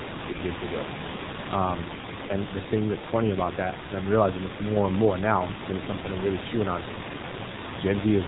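G.723.1 codec damage runs from the start of the clip to its end. The speech has been squeezed through a low-rate telephony coder, and the heavy smearing fits the 6.3 kbit/s mode. Nothing survives above 4 kHz, so the speech is muffled. Each 30 ms frame carries a coarse, slowly updated model of the vocal tract, which leaves consonants blurred and gives the voice a hoarse, grainy edge. Room noise about 10 dB below the speech sits under it all.

VoIP packet loss concealed by the speech codec occurs from 0.32 to 0.39 s, just before "good to go". About 30 ms of audio, one codec frame, never arrived. The decoder filled the gap by stretching its last pitch and filter settings forward while turning the gain down. Because each frame builds on the previous one, the damage outlasts the gap itself, and the voice stays weak or distorted into the start of the next phrase.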